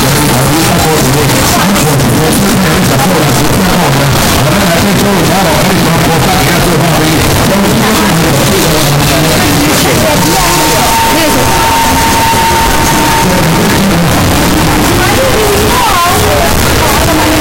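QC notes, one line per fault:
Throughout: float read as integer. The sound is pushed into a nearly square waveform that sits at an almost constant high level, so quiet passages and background noise come through as loud as the main events, and the result is very loud and harsh. The likely cause is 32-bit float samples being read as 32-bit integers, where each sample's sign and exponent bits, not its true amplitude, set the value. The pitch of the sound still survives.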